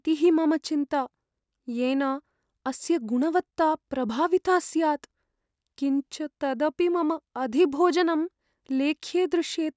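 No audible faults anywhere in the speech; nothing to report.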